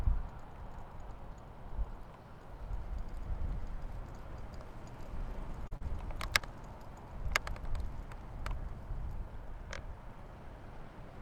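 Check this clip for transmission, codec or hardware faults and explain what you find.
There is one kind of fault here: short concealed packet loss, heard three times in quick succession at 5.67 to 5.73 s, 5.77 to 5.83 s and 6.39 to 6.42 s. Brief stretches of the stream, about 40, 40 and 20 ms, arrived too late, and the receiver patched them by extending the preceding sound before crossfading back. Each gap comes across as a small smear or wobble. On a spectrogram the patches show as smoothed, repeated texture lacking fine detail.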